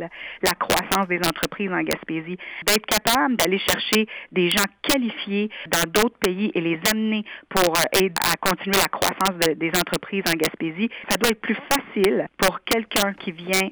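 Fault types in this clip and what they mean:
Integer overflow: the signal was driven about 8 dB past the integer ceiling, and instead of being held at the limit, each overshooting peak wrapped around to the opposite extreme. Only around one percent of samples go over, yet every peak over the limit produces a violent crack far harsher than clipping. On a waveform, peaks jump abruptly to the opposite extreme; on a spectrogram, each wrap shows as a sharp full-height vertical stripe.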